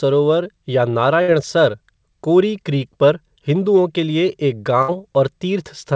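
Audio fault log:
1.22 to 1.31 s and 4.82 to 4.91 s, burst of packet loss: each time about 60 ms of audio was lost or arrived too late, so the receiver stretched the last sound for about 60 ms while fading it. Playback then resumed 60 ms further on, with that stretch skipped. On a spectrogram, whose band already stops at 8 kHz, each gap appears as smeared, repeating bands that dim and then break off abruptly, with a step in the waveform.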